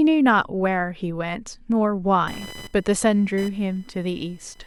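From 2.27 s to the end of the clip, computer activity noise rides under the speech: a buzzing, chirping pulse train near 1 kHz, roughly 20 dB below the speech. Processor or peripheral load currents are disturbing the shared audio ground, so the interference follows the computer's activity rather than the speech.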